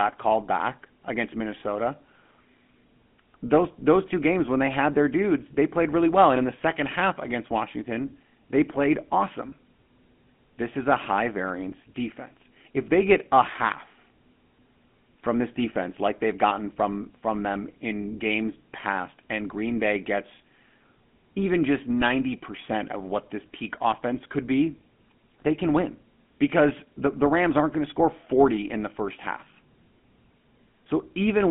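From start to finish the speech carries the GSM full-rate codec's buzzy, gravelly roughness, which fits a 13 kbps GSM stream. The vocal-tract model is driven by sparse regular pulses, and the line band squeezes everything into roughly 150 Hz to 3.4 kHz, with nothing above 3.7 kHz.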